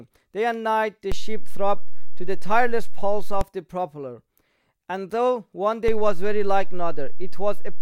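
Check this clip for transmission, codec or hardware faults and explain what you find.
Two DC steps are present. A low thump at 1.12 s marks the first. The sound carries on unchanged over it, and a second thump at 3.41 s marks the waveform's zero line returning to normal. Another thump at 5.88 s begins the second, and that offset holds to the end of the clip. Each time, the baseline jumps by about -14 dBFS, the kind of shift a converter recalibrating or an offset input being switched in would cause.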